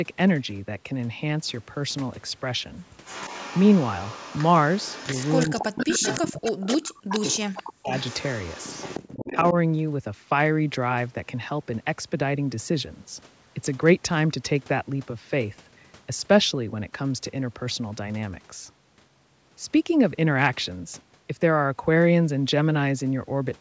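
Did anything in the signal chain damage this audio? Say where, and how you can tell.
Yes. From 3.05 to 6.77 s, and again from 7.09 to 9.51 s, a faint delayed copy of the speech trails the talker by 309 ms. It sits roughly 10 dB below the speech in the first stretch and nearer 15 dB below in the second. This is echo leak at the call-processing stage. The far end was likely on a loudspeaker, and its echo canceller failed to subtract everything its microphone caught, so the residue came back down the line.

Speech suppressed in double talk appears where the two sides overlap. Between 5.46 and 7.92 s the speech drops away in pieces, losing as much as around 40 dB, and the gaps add up to about a second and a half. At 9.1 to 9.55 s a shorter, shallower dip of about 25 dB follows. The cause is likely the same call processing: unable to separate local speech from the returning echo, the canceller attenuated both. 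The audio itself stops at 8 kHz, consistent with the call's band limit.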